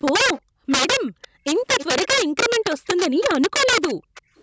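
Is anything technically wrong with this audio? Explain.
Yes, there are three distinct faults in this speech.

Integer overflow runs through the whole clip. The signal is driven about 12 dB past full scale, and the peaks that exceed the limit wrap to the opposite sign instead of being held. Only a small fraction of samples go over, but each one produces a violent crack on loud syllables. These cracks are far harsher than clipping, which merely flattens the tops of peaks.

An echo leak is heard at 0.34–0.71 s, 1.08–1.28 s, 1.79–2.08 s, 2.7–3.25 s and 3.88–4.42 s. Each is a faint delayed copy of the speech, trailing about 325 ms behind (352 ms in the first). It sits about 15–25 dB below the direct sound. This is likely loudspeaker sound that the far side's echo canceller failed to remove. The repeats are a discrete copy at a fixed lag, not smeared room reverberation.

Background gated by the echo canceller occurs at 0.41–0.69 s, 1.18–1.44 s and 3.95–4.36 s. 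The canceller clamps the microphone while the loudspeaker plays, so the room sound drops by about 40 dB and then returns. These are short holes in the ambience, which distinguishes them from a steady noise-reduction floor.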